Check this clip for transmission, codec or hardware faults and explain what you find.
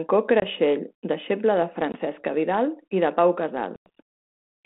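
There's packet loss on an ADPCM call: hard-edged dropouts at 0.40–0.46 s, 1.92–1.98 s (just after "deixeble de") and a longer one at 3.76–3.89 s.

The first two are about 20 ms of lost sound each, roughly one packet. The last is about 100 ms, around five packets. Each gap is filled with silence. That leaves the receiving decoder's predictor and step size out of step with the sender's, so the speech comes back with brief, slight distortion before settling.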